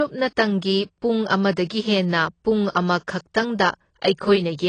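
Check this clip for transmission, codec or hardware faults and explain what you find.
Two faults are present: codec damage across the whole clip, and one pre-echo.

AAC compression runs from start to finish. Nothing is heard above 9.3 kHz. The damage is plainly audible. The likely cause is AAC-LC coding at a low bitrate, which fits a rate near 24 kbps. At that rate the encoder drops the top band and quantises the rest coarsely against a hearing model. The speech sounds dull and muffled. Sibilants lose their edge and take on a smeared, fizzy texture.

Pre-echo appears at 2.71 to 2.75 s, just after "ꯄꯨꯡ ꯑꯃꯗꯒꯤ ꯍꯦꯟꯅ ꯄꯨꯡ". A short hiss leads into a sharp onset, spread over about 37 ms. The same transform codec spreads its quantisation noise evenly across a block. The noise is sized for the loud attack, so it also fills the quiet moment before that attack. The onset sounds softened and smeared rather than crisp.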